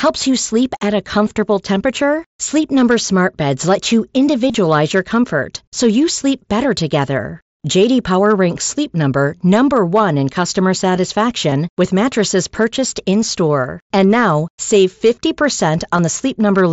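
Concealed Bluetooth headset packet loss strikes at 4.48–4.54 s, 11.50 s and 15.97 s. Missing packets are filled by repeating recent waveform. The first gives a brief buzz.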